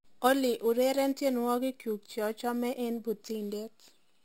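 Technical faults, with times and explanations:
throughout, imaging from sample-and-hold upsampling: unsmoothed repeated samples mirror the speech into 6–12 kHz, about 19 dB down, giving a metallic fizz that suggests a 12 kHz source.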